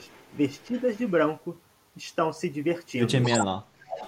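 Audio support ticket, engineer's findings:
Echo leak at 0.06–0.38, 0.57–1.11, 3.22–3.46 and 3.86–4.08 s: copy of the speech delayed 258 ms, very faint early, nearly as loud late. Spectrogram shows the harmonics repeated 0.26 s later. Likely a far-end echo canceller passing residual.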